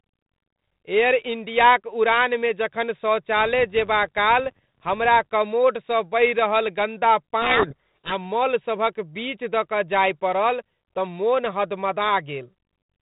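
At 7.42 s, just after "कमोडसँ बहि रहल गन्दा", a codec payload misread sets in and lasts until 8.15 s. The decoder is reading each G.726 code word with its bits in the wrong order, so every quantised difference is wrong and the adaptive predictor drifts. The speech is buried in harsh, rasping distortion. On a spectrogram the harmonic striations dissolve into dense broadband noise up to the 4 kHz ceiling. The waveform turns spiky and jagged. Either side of it, the 32 kbit/s G.726 path carries only light coding noise.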